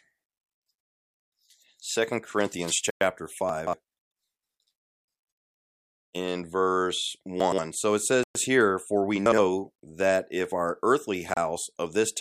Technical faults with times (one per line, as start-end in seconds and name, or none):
0.81-1.14 Bluetooth stall
2.90-3.01 Bluetooth stall
3.49-3.73 chunks out of order
7.40-7.58 chunks out of order
8.23-8.35 Bluetooth stall
9.26-9.38 chunks out of order
11.34-11.37 Bluetooth stall